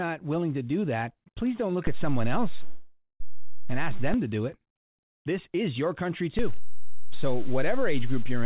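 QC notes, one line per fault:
1.87–4.14 s and 6.39 s to the end: DC step. Right after "that please don't look" the waveform's zero line jumps to a new offset, holds, and steps back just before "to do it." A second step follows "is your country" and holds until the end of the clip. Each shift is heard as a low thump or click while the speech carries on unchanged. On the waveform, the whole trace sits displaced from centre between the steps. A spectrogram shows a brief broadband vertical line at each edge and added energy at 0 Hz.
2.66–3.22 s: call audio freeze. For about 540 ms the sound stops progressing. The last fragment is stretched into a fading buzz or hiss, ending in roughly 70 ms of silence. The speech then resumes exactly where it stopped, so nothing is lost and everything after this point runs 540 ms later. The likely cause is delayed packets draining the jitter buffer. The spectrogram shows a smeared, decaying band in place of speech structure, then a short blank strip.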